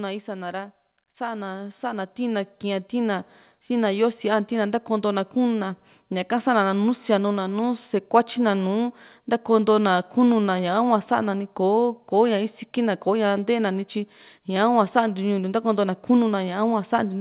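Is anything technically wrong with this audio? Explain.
Yes, there's automatic gain rising from 1.17 to 3.35 s. The gain control judged the input too quiet and ramped up about 10 dB, so speech and background swell together.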